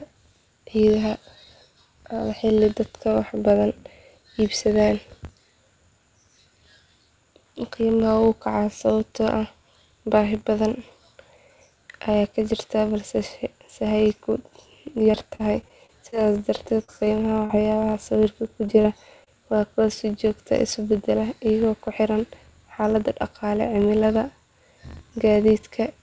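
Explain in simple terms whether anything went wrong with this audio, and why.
Several things went wrong, and they sound different from each other.

Across the whole 26-second speech clip there is a steady buzz at about 46.9 Hz. This is a filter restarted on every block: a processing stage forgets what it was doing and starts each chunk of audio from silence, leaving a small click at every restart. The rate fits a 1024-sample block. Unlike packet loss, this buzz never stops. It runs evenly from start to finish and gets louder or quieter with the speech.

From 15.04 to 17.95 s the speech turns choppy and robotic. This is repeated packet loss. Seventeen separate pieces of the call arrived too late or not at all, the longest under 40 ms, and each gap was patched by stretching the last bit of sound. Because the gaps come in quick succession, the patches pile up into a choppy stutter. The filter buzz, by contrast, is a steady tick with no missing sound.

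Just after that come three isolated glitches, at 18.67–18.70 s, 18.82–18.86 s and 19.24–19.28 s. Each is a short concealed packet loss, where about 20 ms of audio went missing and was filled in smoothly. Each one sounds like a brief smear or wobble, and a quick consonant might drop out. What sets them apart from the robotic stretch is that they are single, spaced-out blips, not a continuous run of damage.

The audio also passed through a call codec, which removes everything above 8 kHz, so the highest frequencies are missing even outside these faults.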